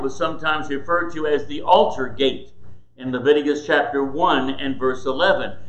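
No technical faults are audible.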